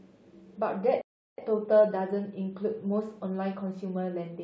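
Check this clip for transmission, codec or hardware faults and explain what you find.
There is one fault: a playback stall between 1.01 s and 1.38 s. The speech cuts off mid-flow and the output falls fully silent for about 370 ms before the sound carries on. The likely cause is the player running out of buffered data, or its playback thread being held up, so nothing reached the output until it recovered. Unlike a brief dropout, this is one long, clean hole. The break is too abrupt to be a natural pause.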